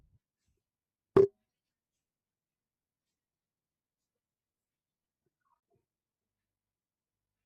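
A speech recording in which, between 5.55 and 5.63 s, the sound briefly fades to silence in a few soft-edged gaps, adding up to about 40 ms missing across 80 ms, the longest around 30 ms. This is AAC frame loss with muting: lost frames were zeroed and the overlapping windows smoothed each edge, which points to several short low-delay frames, likely from AAC-ELD, going missing.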